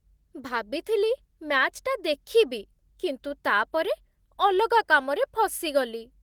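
Nothing in this speech recording stands out as a technical fault, so there's no problem to point to anywhere along the way.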